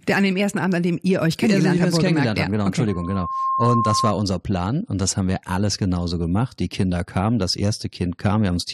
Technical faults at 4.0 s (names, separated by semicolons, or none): loudspeaker feedback squeal